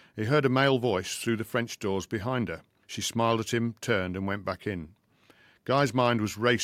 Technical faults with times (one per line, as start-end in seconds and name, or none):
none